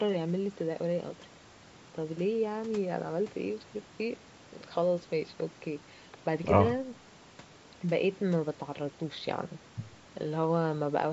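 No technical faults occur at any point in the speech; the call microphone processing, with its normal trimming of the lowest bass and nothing above 8 kHz, is working as expected.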